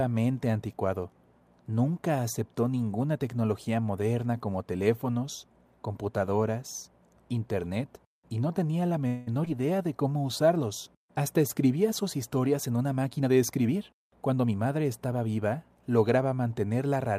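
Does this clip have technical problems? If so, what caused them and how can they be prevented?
Yes. After "y no tenía la", from 9.07 to 9.29 s, the speech stretches into a fading buzz for about 0.2 s with nothing lost. That is a call audio freeze, likely from delayed packets draining the jitter buffer. Unlike packet loss, the speech then resumes intact. A larger jitter buffer or a steadier network path prevents it.

From 9.45 to 9.48 s, just before "de cómo usarlos", there is a brief smear. This is short concealed packet loss: 40 ms of audio never arrived, and 13 ms of synthesized continuation covered the hole. Unlike the freeze, real audio is missing here. Forward error correction or redundant packets would prevent it.

From 13.21 to 15.15 s, after "sus historias en una", the speech runs at 110% speed with unchanged pitch. This is a jitter buffer speed-up, which trimmed about 0.2 s of pitch periods to reduce the accumulated delay. 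It is a tempo change, not a gap. Smoother packet delivery avoids the buildup that forces it.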